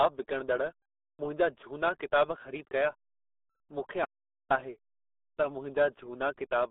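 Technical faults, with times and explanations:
Throughout, RealAudio 14.4 codec: the speech has that muffled, gargly dial-up quality, squeezed into roughly a 250 Hz to 3.7 kHz band with nothing at all above 3.8 kHz. At around 8 kbit/s the coder throws away most detail, so consonants smear and everything sounds underwater.
4.05 to 4.50 s, audio dropout to silence: the speech just stops dead for about 0.45 s and comes back mid-flow, with silence in the gap, not even room tone. That points to the input likely being lost briefly while the recorder kept writing silence.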